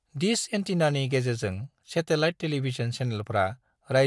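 From start to end the speech carries a resampler restarted on every block: the conversion, which fits a 48 kHz to 24 kHz change, was run on each 40 ms block in isolation, so every block edge lacks its true neighbours and picks up a small error. The result is a rough 25 Hz ticking buzz under the speech that vanishes in pauses. A spectrogram shows faint vertical lines every 40 ms, and the waveform shows small steps at those boundaries.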